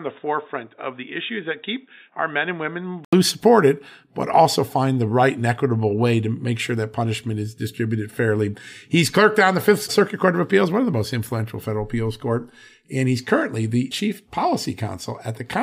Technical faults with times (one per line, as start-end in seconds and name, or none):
0.00-3.13 input switched to a poorer device